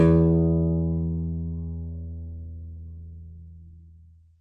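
Across the whole of the music, the encoder has likely run out of bits: the damage is AAC compression, and the plainly audible losses fit AAC-LC at roughly 32 kbps. Starved of data, the coder has discarded everything above 9 kHz and quantised the remaining bands coarsely, so the top end is missing and what survives sounds dull and smeared, with a warbling, fizzy texture clinging to sustained tones.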